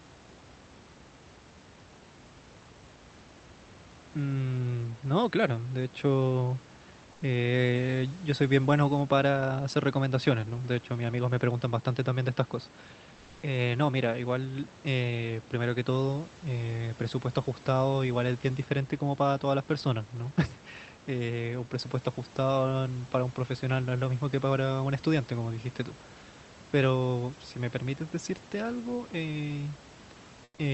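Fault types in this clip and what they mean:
Comfort noise in place of the background: Twice, the real background gives way to a smooth, featureless hiss. At 7.12 s it lasts 90 ms, about 2 dB quieter. At 30.44 s it lasts 140 ms, about 10 dB quieter. Opus DTX pausing transmission is the likely cause.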